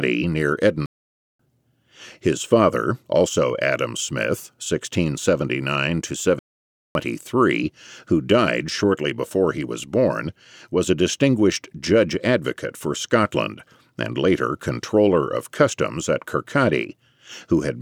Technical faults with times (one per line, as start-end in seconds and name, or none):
0.86-1.39 playback stall
6.39-6.95 playback stall